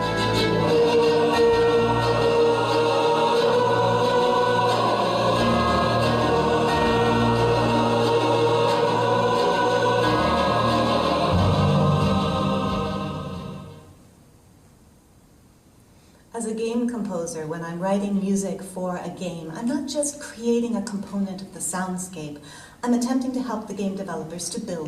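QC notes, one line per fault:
No faults found in this audio. Nothing here calls for a timed entry.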